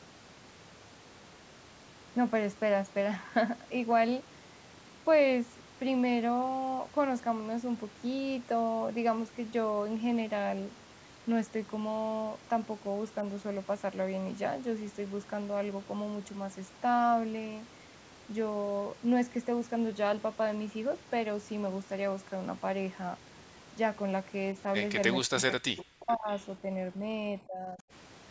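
From 25.24 to 26.31 s the speech sinks by about 40 dB for roughly a second. This is speech suppressed in double talk, most likely an echo canceller that could not tell the near talker from loudspeaker echo while both sides spoke and so turned everything down. The waveform envelope collapses almost to nothing there, and the spectrogram shows the harmonic bands fading out. The call microphone processing's band limit, with nothing above 8 kHz, stays visible throughout.

At 26.33 to 26.42 s a brief echo leak appears. A faint copy of earlier speech comes back about half a second late, at about 25 dB below the voice, likely as an echo canceller let part of the loudspeaker pickup through. The spectrogram shows a weak smear of repeated formant pattern.

The suppression returns twice. From 26.55 to 27.09 s it is a shallow dip of about 5 dB. From 27.38 to 27.86 s it is a deeper cut of about 25 dB. 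Both show as notches in the envelope.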